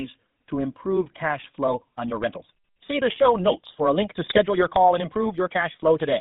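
The whole speech clip carries the sound of the GSM full-rate codec: the line band runs from about 150 Hz to 3.7 kHz, and a gravelly, buzzy roughness consistent with a 13 kbps coder is plainly audible. On a spectrogram everything above 3.7 kHz is empty, and harmonics look smudged and grainy. From 1.64 s, just after "to improve cash", to the end, the pace jumps to about 1.44 times normal while the pitch stays put. This is likely a time-stretched section, sped up by cutting short pieces out, so it sounds choppy and rushed. A waveform shows syllables packed closer with abrupt joins, and the spectrogram shows compressed timing but unchanged harmonic spacing. Between 4.26 and 4.39 s, GSM bit errors corrupt the decoder's filter, pitch and gain values, producing squawks and gargling pops. The span fits about six 20 ms frames, which show up as sudden level spikes and smeared vertical bands on the spectrogram.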